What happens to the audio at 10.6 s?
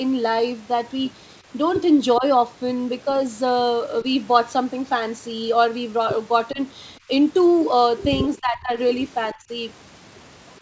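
A brief echo leak from 10.56 to 10.6 s: a very faint copy of the speech returns 420 ms late, likely from an echo canceller missing loudspeaker pickup, distinct from reverb's continuous smear.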